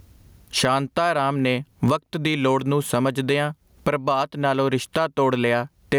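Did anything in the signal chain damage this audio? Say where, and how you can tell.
Yes. The speech shows gain pumping throughout, at the analogue input and gain-control stage. The gain swings by roughly 25 dB. Loud and quiet passages sit unnaturally close in level and the sound feels squashed. The likely cause is input gain set far too high, with a fast limiter or compressor clamping down on every peak and releasing in the gaps.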